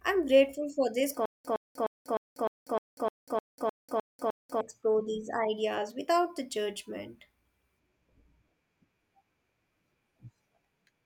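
From 1.26 to 4.61 s, a 113 ms burst repeats every 305 ms between dead silences: stutter with silent gaps, likely a stalled stream replaying its last fragment.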